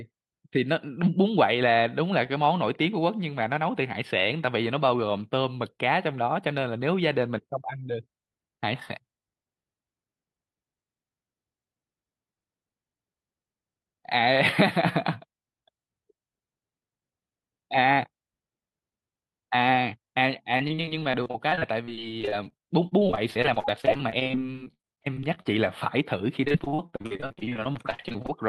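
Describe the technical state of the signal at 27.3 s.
At 27.3 s the speech sounds choppy and robotic, with pieces of syllables dropping out. This is repeated packet loss, running from 26.45 s to 28.30 s. Packets went missing again and again, and each hole, the longest about 51 ms, was papered over by stretching the preceding sound before the next loss arrived. Roughly 41% of this stretch is synthesized fill rather than real audio, which causes the mechanical texture.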